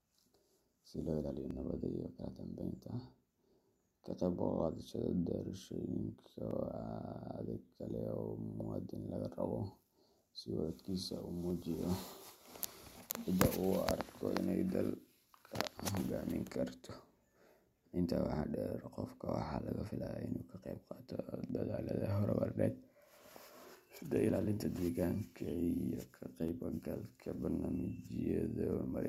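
Regular clicks every 5 s from 1.51 to 26.48 s: likely clock drift buffer slips, a roughly 150 ppm clock mismatch dropping or repeating samples.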